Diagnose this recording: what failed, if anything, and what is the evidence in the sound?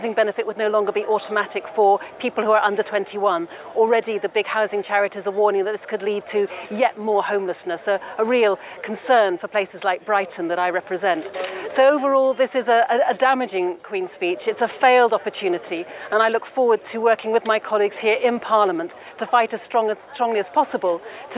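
Nothing failed: no stage in the chain, from wiring and conversion through buffering, transport and playback, leaves any audible evidence of a fault anywhere in the recording.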